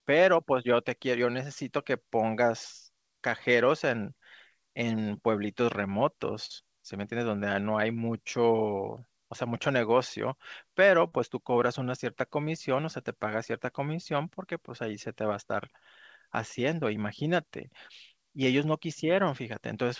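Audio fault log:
6.46–6.52 s and 11.08–11.14 s, short concealed packet loss: about 40 ms never arrived and was patched by extending the preceding sound, so each spot smears or wobbles briefly rather than dropping to silence.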